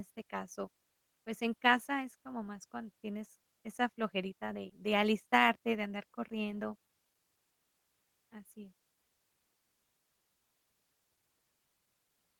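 A short recording of speech, with no technical faults to report. Nothing in it calls for a time or a cause.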